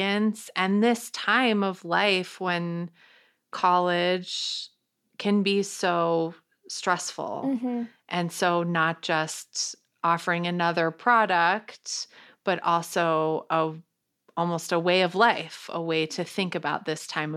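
No technical faults can be heard anywhere in this speech recording. Nothing at any point in the clip calls for comment.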